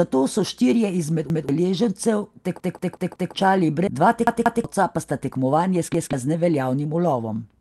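It's a short speech clip that's been through a call path, with the top end rolled off around 12 kHz by the Opus codec, and it's got three kinds of trouble. First, repeated buffer: right after "so štirje izmed" at 1.30 s, a chunk of about 186 ms plays twice, then again at 2.60 to 3.34 s (four extra plays), 4.27 to 4.64 s (two extra) and 5.94 to 6.13 s (one extra). New audio didn't turn up in time, so the device replayed its last block, which fits an 8192-sample buffer. You get stutters with hard joins, and the real audio behind them is lost. Then a skip ahead at 3.87 to 3.89 s: roughly a second of audio is just gone, with no fill, and the two sides butt straight together. From 3.99 to 7.31 s there's a jitter buffer speed-up. The buffer was holding too much delay, so the receiver kept trimming tiny pitch-period slices, about half a second in all. Speech runs at roughly 116% speed with the pitch unchanged, so it sounds hurried.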